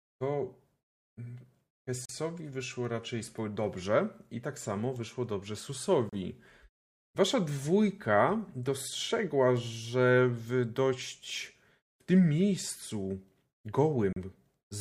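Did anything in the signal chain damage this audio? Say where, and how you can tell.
Yes. The damage is a gap between stream segments at the playback stage: hard-edged silences of about 39 ms at 2.05 s (before "wyszło raczej dobrze i"), 35 ms at 6.09 s (after "tak samo wyszło dobrze"), and 36 ms at 14.13 s. They fall on 4-second segment boundaries where mismatched timestamps were filled with silence. Unlike a dropout, no speech is missing, and the sound resumes exactly where it stopped.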